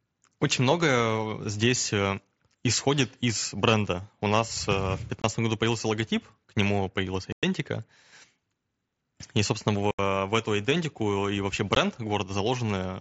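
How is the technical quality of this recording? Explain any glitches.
The recording has four dropouts from unconcealed Bluetooth headset packet loss, at 5.22–5.24 s, 7.32–7.43 s, 9.91–9.99 s and 11.75 s. Over the headset link, which carries the wideband mSBC codec with its 8 kHz speech ceiling, lost packets were replaced by silence or an idle pattern rather than patched. The result is hard-edged holes of about 15 to 105 ms. Codec artefacts would instead sound like graininess, not gaps.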